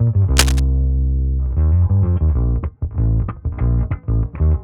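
Right near the start, from about 0.37 to 0.60 s, there's a burst of cable scratch noise: a dense, ragged scratching and rustling laid over the audio, sitting only a few dB under the sound itself. The likely culprit is a worn cable, connector or control being moved, with its contact resistance jumping around rapidly and spitting those uneven bursts of noise into the signal for that quarter second.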